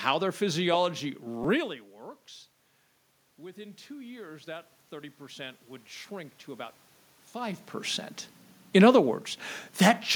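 At 1.44 s, just after "their physiology", a repeated buffer occurs: new audio missed its deadline, so the output replayed the last block twice more. The roughly 5 ms piece, which fits a 256-sample buffer, sounds three times with hard joins. The result is a brief buzzy click, with about 10 ms of audio lost.

From 3.37 s to 7.62 s, automatic gain rising is heard. The input fell by about 18 dB, and the gain control responded by gradually raising its gain by about 8 dB. Speech and room noise swell together over those four seconds.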